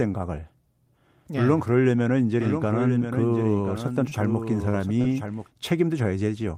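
A doubled audio track runs from 2.40 s to 5.47 s. A second copy of the speech sits underneath the original, about 10 dB quieter and trailing it by roughly a second. The copy is full-band and dry, with no reverberant tail or room colouring. It switches on and off abruptly at those two points. The likely cause is the signal being picked up a second time through a slower path, or an edit leaving two misaligned copies in place.

Short concealed packet loss occurs three times within that stretch: at 4.09 to 4.13 s, 4.69 to 4.75 s, and 5.01 to 5.06 s. The receiver lost about 20 ms, 40 ms and 20 ms of audio, respectively, and patched each gap by extending the preceding sound, pitched if voiced, noise-like if not, before crossfading back. Each one is a brief smear or wobble.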